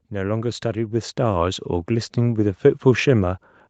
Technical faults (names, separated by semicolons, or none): automatic gain rising